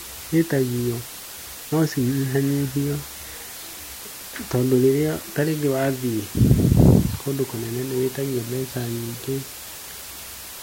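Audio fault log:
Throughout: low bit depth with dither. Speech rounded to 6 bits with dither leaves a steady, even hiss roughly 15 dB down, a flat broadband floor on a spectrogram.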